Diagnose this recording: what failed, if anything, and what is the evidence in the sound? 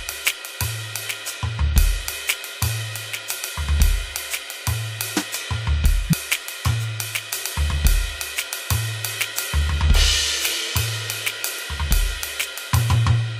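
Codec stage: at 6.07–6.13 s the music jumps ahead about 50 ms, marking compressed frames skipped.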